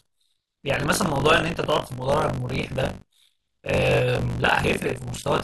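Throughout the speech, buffer tearing adds a 50 Hz robotic buzz, present only while sound plays. Writer and reader cross inside each 20 ms period, so roughly a third of each holds audio about 40 ms old. The waveform shows hard steps every 20 ms, and the spectrogram shows matching vertical striations.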